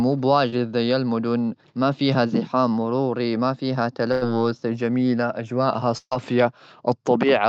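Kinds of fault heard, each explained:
Short concealed packet loss: About 20 ms of speech never reached the decoder in time, so the receiver extended the preceding sound for roughly 26 ms before blending back into the real signal. Around 0.49 to 0.54 s, just before "زي المدن ما فيها", this is a brief smear.
Burst of packet loss: Several consecutive packets went missing, and the receiver continued the last sound while fading it down before the real audio resumed further on. After "زحام مروري ما فيها" at 4.12 to 4.23 s, about 100 ms is lost behind a 93 ms held, decaying fill. At 5.97 to 6.13 s, about 140 ms vanishes, and the fill fades into roughly 40 ms of outright silence.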